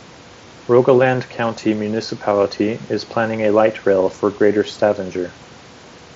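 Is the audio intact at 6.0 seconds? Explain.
Yes, the audio is intact at 6.0 seconds, with no fault at that moment.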